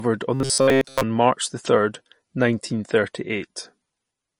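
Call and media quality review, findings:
Watery, swirly texture across the whole clip, sibilants chirpy. Likely MP3 compression at a low bitrate, around 40 kbps, with the encoder cutting the treble and toggling weak frequency lines per frame. Unlike plain low-pass filtering, the swirl moves over time.

0.34 to 1.03 s: rigid metallic buzz at 134 Hz over the speech. Likely robotic sound from repeated short buffers: a chunk of about 7.5 ms replayed for most of that span while real audio is skipped. Unlike dropouts, there are no gaps, only a fixed imposed pitch.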